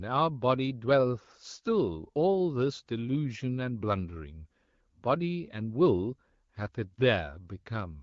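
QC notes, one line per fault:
No faults heard anywhere in this speech recording.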